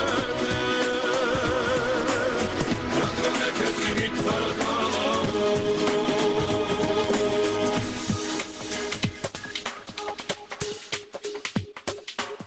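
Gain pumping runs through the whole clip, with the gain swinging by around 20 dB. The likely cause is input gain set far too high, with a fast limiter pulling it back, leaving the audio squashed within its 8 kHz band.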